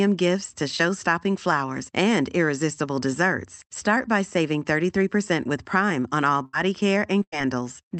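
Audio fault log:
6.45–6.55 s and 7.23–7.34 s, burst of packet loss: just after "on all", 80 ms then 100 ms go missing, smeared over by the last sound fading out before the audio jumps ahead.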